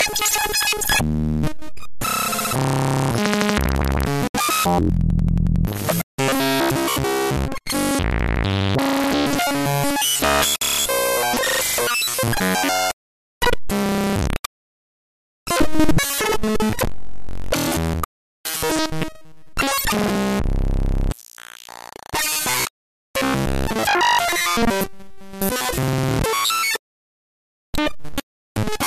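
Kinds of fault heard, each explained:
Gap at a join of encoded pieces: leftover encoder padding opens 69 and 55 ms silences at 4.28 and 10.56 s; unlike a dropout, nothing is lost and sound resumes where it stopped.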